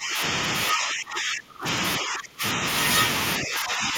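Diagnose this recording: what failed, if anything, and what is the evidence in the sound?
Speech suppressed in double talk at 0.0–0.22, 0.69–1.67, 1.98–2.63 and 3.38–3.97 s: speech dips by up to about 25 dB, likely from the echo canceller ducking during call processing.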